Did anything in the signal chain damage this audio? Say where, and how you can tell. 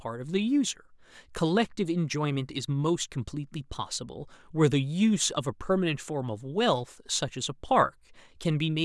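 No, nothing in this speech recording stood out as damage from any stage of the signal chain on listening.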